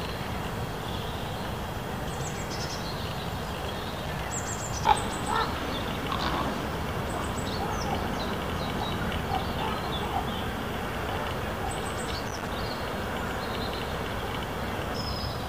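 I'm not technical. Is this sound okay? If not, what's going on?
No, there are two bursts of loose connector crackle, from 3.41 to 4.34 s and again from 12.25 to 12.48 s. A worn or dirty plug contact keeps touching and losing touch as it shifts, chopping the sound on and off. Unlike steady record hiss or evenly spaced digital clicks, this scratching comes in uneven clusters, as if someone wiggled a cable.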